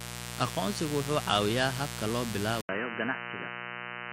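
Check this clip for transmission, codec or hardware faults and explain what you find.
Two faults stand out in this speech recording: a constant mains buzz and a mid-clip drop in bandwidth.

Mains buzz, throughout: a steady, raspy buzz sits only about 10 dB below the speech. Sharp switching spikes from a dimmer, rectifier or unshielded cable leak in twice per 60 Hz cycle, spraying harmonics well up into the kilohertz range.

Input switched to a poorer device, from 2.61 s to the end: right after "caawiyaa habka loo" there is an 80 ms gap. The speech then turns dull and boxy, with nothing above 3 kHz and a faint new noise floor far beneath it, while the loudness stays the same. The likely cause is the system moving its input to a narrower-band microphone or a headset call profile.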